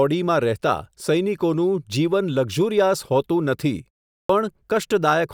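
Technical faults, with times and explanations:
4.22–4.29 s, clipped start after a pause: after a 0.4 s gap the output seems to have dozed off, so the first 74 ms or so of the next speech gets eaten while it wakes up, and the word pops in abruptly, missing its opening sound.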